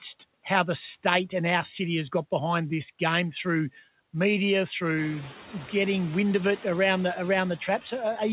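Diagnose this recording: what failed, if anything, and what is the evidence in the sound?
Call processing: noise suppressor artifacts throughout. The background drops by about 14 dB between phrases and swells back under speech, including after the room noise steps up near 5 s.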